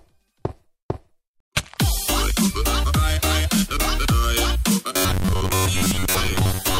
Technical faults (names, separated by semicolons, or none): robotic sound from repeated short buffers